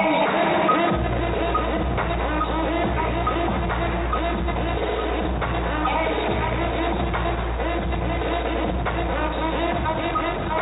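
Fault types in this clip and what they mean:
Nothing here points to a technical fault, so there's nothing to list for this one.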